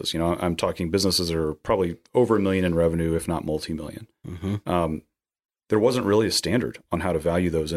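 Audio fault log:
No faults detected.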